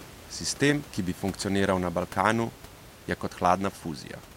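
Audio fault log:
No faults are heard in this speech clip. Room noise sits about 20 dB below the speech as part of the recording.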